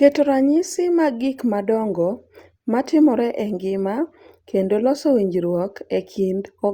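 No technical faults can be heard anywhere in this speech recording.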